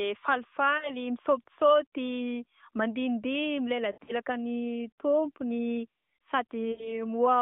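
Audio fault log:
0.78–0.92 s, 3.92–4.12 s, 6.72–7.02 s: lost AMR speech frames. Radio errors corrupted frames, so the decoder repeated the last good pitch and vocal tract settings at falling gain. This causes brief warbles and drawn-out fading sound. The middle event has losses scattered over 160 ms, with a longest gap of 60 ms. Speech returns weak and rough through the narrowband 200 Hz–3.6 kHz line.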